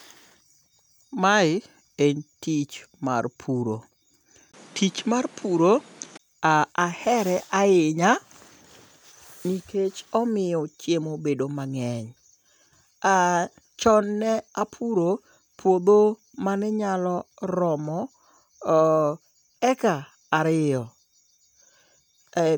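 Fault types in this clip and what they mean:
Input switched to a poorer device: 20 ms waveform gap at 4.52 s; until 6.19 s the spectrogram is blank above 11.8 kHz, likely another microphone.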